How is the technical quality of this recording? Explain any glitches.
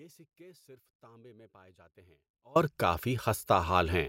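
The recording opens in an audio dropout to a faint residue: from the start until 2.56 s, only a faint sound sits roughly 30 dB below the signal, likely a signal path interrupted while the input stayed live, before full level returns abruptly.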